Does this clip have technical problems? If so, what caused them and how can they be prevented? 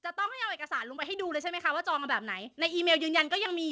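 Yes. The microphone volume is stepped up twice. At 1.02 s the signal jumps by about 6 dB. At 2.04 s it jumps again by about 4 dB. The voice and the background rise together. The call software judged the microphone too quiet and raised its input gain in one step. Nothing above 8 kHz comes through, which fits a G.722 call path. Prevent it by turning off automatic input gain and setting the level beforehand.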